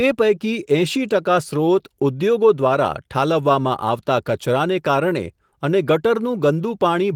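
No technical faults are present in this speech: the Opus voice compression works as intended in its hybrid mode, leaves the band open up to about 20 kHz, and adds only light coding traces, which fits a bitrate around 24 kbps.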